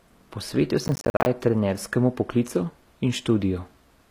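Throughout the speech the treble sounds synthetic: sibilants are gritty and metallic, and nothing is present above 14.9 kHz. This is likely HE-AAC compression, rebuilding the top band from copied lower bands at a rate consistent with roughly 24 kbps. Unlike plain low-pass filtering, the treble stays bright but does not match the harmonics below it.

From 0.84 to 1.26 s a processor overload crackle tears through the speech. Roughly 30 buffers, each around 10 ms, miss their deadlines and leave hard-edged silent gaps. Unlike a single dropout, the result is a dense gritty rasp that stops once the load passes.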